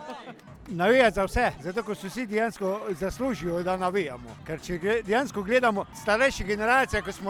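Right around 2.18 s there's a call bitrate drop. The bandwidth estimate fell and the encoder got squeezed hard, so it codes everything much more coarsely and trims off the top end. You can hear the sound go dull and a bit watery and rough, which fits a fall from something like 128 kbps down to roughly 22 kbps. It sits at that low point for nearly two seconds before clearing up at about 4.21 s.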